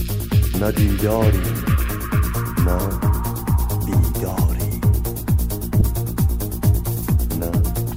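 At 5.8 s, lost LE Audio frames, about 15 ms: the LC3 decoder refilled the gap with repeated spectrum, sign-scrambled, so a brief noisy smear breaks any tone, visible as a diffuse spectrogram patch.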